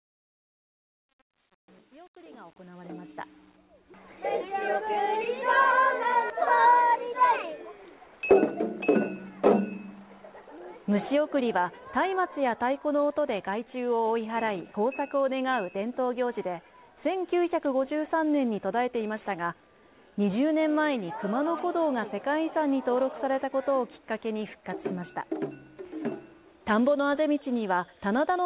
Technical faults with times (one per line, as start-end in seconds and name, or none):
0.00-3.57 truncation distortion on a fade
6.30-6.32 skip ahead